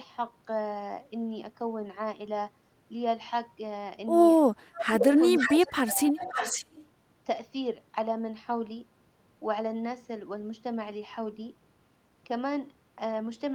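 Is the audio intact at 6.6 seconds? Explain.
No. From 6.21 to 6.86 s there is an echo leak: a delayed copy of the speech trails the original by 545 ms at around 10 dB below it, likely a far-end echo canceller letting loudspeaker sound back through. That distinct half-second lag, not a smeared decay, separates it from room reverberation.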